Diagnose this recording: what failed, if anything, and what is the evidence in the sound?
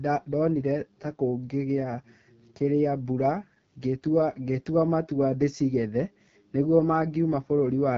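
Codec stage: AMR wideband (HD Voice) codec damage throughout the speech. It sounds rough and raspy, with nothing above 7.3 kHz, which points to one of AMR-WB's lowest bitrates, around 8.85 kbit/s.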